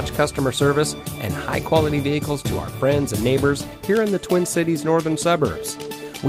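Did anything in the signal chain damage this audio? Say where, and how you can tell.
No, no signal-chain damage heard.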